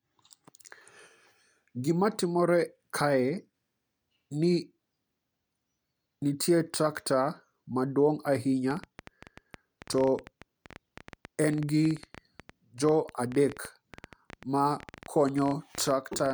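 A speech recording in which, from 8.71 s through to 16.32 s, a train of clicks ticks and pops over the voice and through the pauses alike. The clicks arrive at an uneven pace of about 10.1 per second, some seventy in all, each much the same in shape and peaking roughly 5 dB above the speech. Such a stream of near-identical pulses is likely interference from nearby equipment or a faulty connection or power supply.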